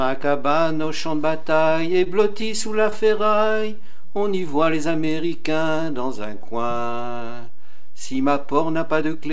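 The audio passes through a call codec that leaves nothing above 8 kHz, and it has four faults. A DC offset runs throughout: the waveform sits shifted off zero by a constant amount. It is inaudible as such, but it eats headroom and leaves a steady component at the very bottom of the spectrum. Repeated stalls (stutter) occur from 1.80 to 3.87 s. Packets kept arriving late, so the jitter buffer emptied about fifteen times, and the receiver extended the last sound to cover each wait, the longest 21 ms and 163 ms in all. Nothing is lost, but the passage drags and stutters. Overlapping this, a jitter buffer slow-down runs from 3.78 to 6.75 s. The receiver was rebuilding its reserve by repeating single pitch periods and bits of pauses, adding 253 ms and playing at 92% speed with the pitch unchanged, so sounds are drawn out. Finally, a jitter buffer speed-up from 8.54 to 9.31 s plays at 112% speed. 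The buffer held more audio than its target, so the receiver cut short pitch-period pieces, about a tenth of a second in total, which makes the ending sound hurried.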